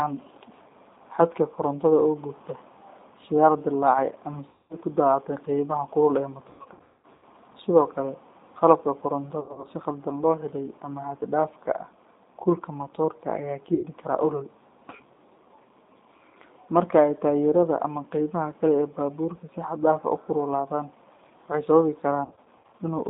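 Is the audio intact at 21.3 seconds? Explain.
No. At 21.3 seconds, as across the whole clip, the speech carries G.729 codec damage: at 8 kbit/s it is rebuilt from a vocal-tract filter, pitch predictor and sparse pulses, sounding rough and synthetic within a 200 Hz to 3.7 kHz band. That buzzy, modelled quality sets it apart from a clean telephone band-limit.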